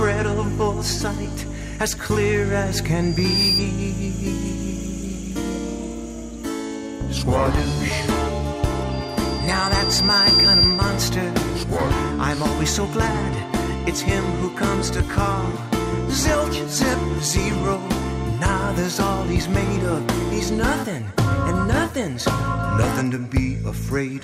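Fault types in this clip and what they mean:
Loudspeaker feedback squeal: the microphone picks up its own loudspeaker and the loop runs away at 4.8 kHz, swelling quickly at 3.0 s and more slowly from 8.9 s until it stands clearly above the sound. A spectrogram shows one bright horizontal line, and the waveform shows a steadily growing envelope.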